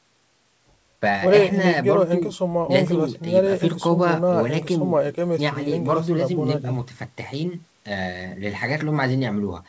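Nothing in the speech signal points to a technical fault: it shows the normal bandwidth of a wideband call, with no content above 8 kHz, which fits a G.722 codec at 64 kbps, and the lowest bass is removed by the call's usual microphone high-pass filtering.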